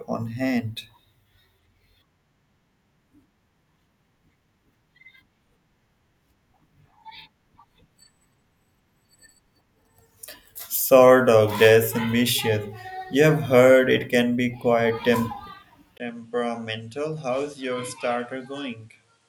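At 15.98 s the recording system likely switched its input to a poorer device, which then carries the speech through to the end at 19.28 s. The change is marked by a brief gap of about 20 ms. After it, nothing is present above 11.4 kHz, so the speech loses its air and sounds duller. The level drops by roughly 10 dB, and a new background noise appears, sitting around 40 dB below the speech.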